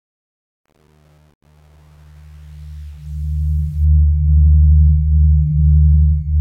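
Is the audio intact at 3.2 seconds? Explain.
No. At 3.2 seconds the audio is still inside the truncation distortion on a fade, which runs from 0.0 to 3.85 s as the level fades in. The fade was computed with too few bits and no dither, which fits an 8-bit stage, so the low-level waveform is built from coarse square steps. The worst grit sits between 0.0 and 3.04 s. By 3.2 s the level has risen enough that the roughness is milder, and it clears as the fade completes at 3.85 s.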